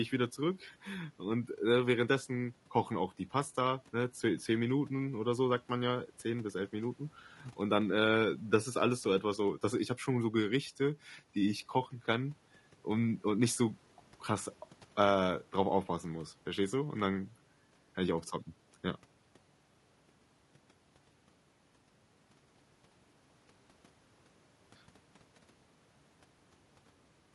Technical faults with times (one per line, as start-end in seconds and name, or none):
0.00-27.34 low-delay AAC compression